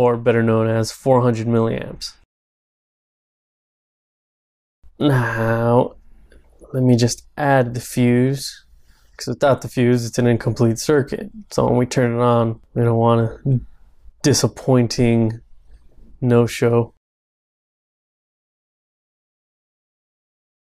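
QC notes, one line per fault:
Nothing stood out on listening.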